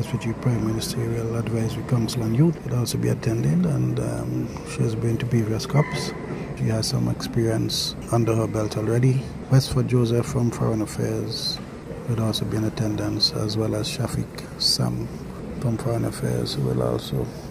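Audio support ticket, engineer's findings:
No audible faults found; nothing to report.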